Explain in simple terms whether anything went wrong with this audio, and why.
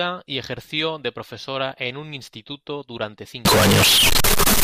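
From 3.45 s to the end of the clip, the speech suddenly turns very loud and harsh, almost like a buzzing square wave, and the background hiss jumps up to the same level as the voice. The pitch of the voice can still be followed. This is the sound of float read as integer: the audio was likely stored as 32-bit floating-point numbers but played back as 32-bit whole numbers, so the stored values were misread.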